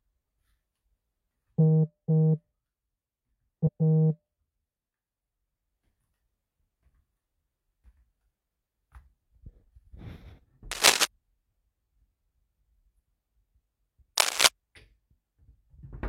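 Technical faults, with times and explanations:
3.63–3.69 s, damaged data in a compressed stream: a brief glitch cuts into the everyday sound for about 70 ms. Corrupted bytes made the decoder misread the frames there, lose sync and then lock back on at the next valid frame header.
10.71–11.05 s and 14.17–14.47 s, cable scratch noise: dense, uneven bursts of scratching and rustling, each lasting about a third of a second and roughly as loud as the sound itself. The likely cause is a worn cable or connector being moved, its contact resistance fluctuating rapidly.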